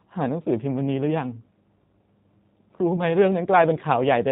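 G.729 codec coding runs throughout this speech at 8 kbit/s, plainly audible: nothing above 4 kHz survives, and the pulse-based excitation leaves the voice rough and slightly synthetic. VoIP packet loss concealed by the speech codec occurs from 2.96 to 3.01 s. About 20 ms of audio went missing, which fits a single lost packet, and the decoder stretched its last pitch and filter over the gap, lowering the gain frame by frame, before recovering.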